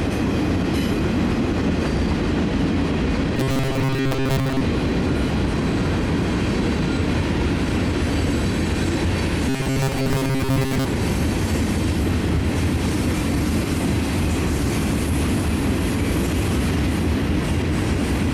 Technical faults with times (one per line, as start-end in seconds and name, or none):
3.37-4.61 robotic sound from repeated short buffers
9.49-10.86 robotic sound from repeated short buffers